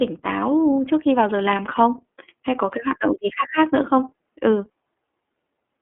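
iLBC codec damage runs through the whole of this speech recording, from start to finish. The sound is confined to a telephone band of roughly 250 Hz to 3.5 kHz, so it is thin and lacks low body and upper air. Each short block is coded on its own without drawing on the previous one, consistent with 30 ms frames and the 13.33 kbps mode. That leaves plainly audible roughness and a synthetic edge on the voice.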